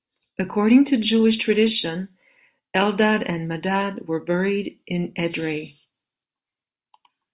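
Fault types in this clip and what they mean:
No technical faults can be heard anywhere in the speech. There is nothing to list for any fault type.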